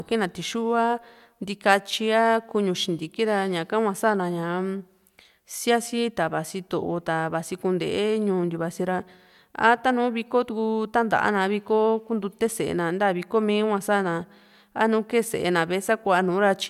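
No technical faults are audible.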